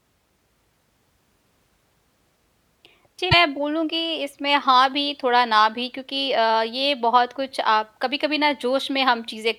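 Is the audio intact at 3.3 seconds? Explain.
No. The likely cause is a broken MP3 bit reservoir: a frame was dropped from the stream, so the frame after it reached back into the reservoir for data it had stored in earlier frames and read bytes belonging to a different frame. From 3.31 to 3.34 s the speech jumps forward. The MP3 frames here are 26 ms long.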